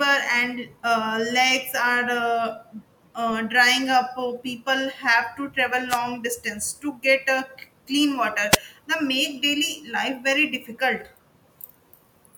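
At 5.89 to 5.99 s and again at 8.50 to 8.58 s the speech is hit by a wireless microphone noise hit, each lasting about a tenth of a second. The analogue radio link fades briefly as reflected signals cancel, so receiver hiss rises. Unlike a digital dropout, which leaves silence or a stutter, this fills the gap with a swish of static.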